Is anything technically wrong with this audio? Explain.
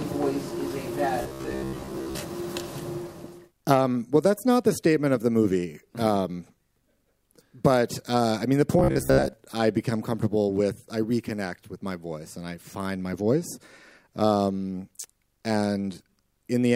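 Yes. Robotic sound from repeated short buffers at 1.22–2.19 s and 8.79–9.33 s: a rigid 66.8 Hz buzz, likely from a 15 ms slice looped over most of the missing audio, shows as evenly spaced harmonic stripes on a spectrogram and a repeating waveform.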